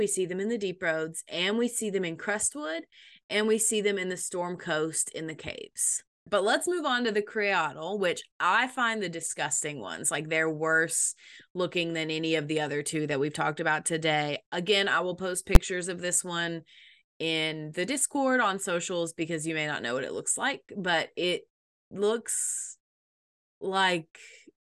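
At 15.55 s the speech is broken by a single loud bang: invalid numbers at full scale. A calculation produced infinite or invalid values, and the output was pinned at one extreme value for about 11 ms, which fits a 512-sample block. Unlike a small click or ordinary clipping, it is a flat hit far beyond the speech's peaks.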